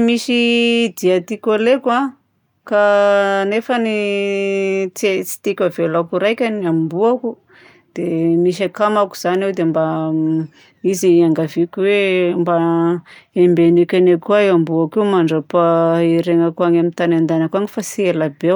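Nothing stood out as a technical problem on listening to this speech recording.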